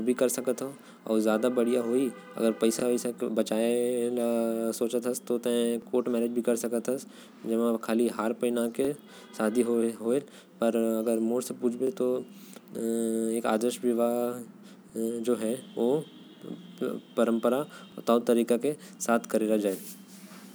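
Every three seconds or so there's a little stutter in the speech, at 2.80, 5.82, 8.85, 11.87, 14.90 and 17.92 s. That's overlapping chunks: the audio was handled in 3-second blocks, and each new block starts about 25 ms before the previous one finished, so that sliver plays twice at every join. Each repeat is too short to register as an echo, so it comes across as a small click or hiccup.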